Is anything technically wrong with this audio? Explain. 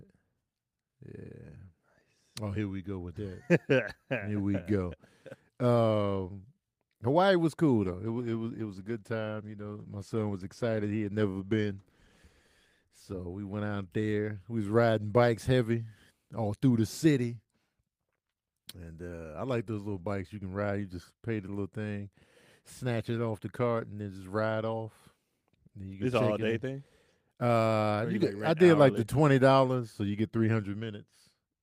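Yes. From 7.85 s to 14.21 s there is a call bitrate drop. The sound turns rough, watery or muffled, consistent with the encoder falling from 40 to about 17 kbps after the bandwidth estimate dropped, and stays at its worst for about 4.3 s before clearing. Unlike packet loss, it degrades continuously rather than with gaps.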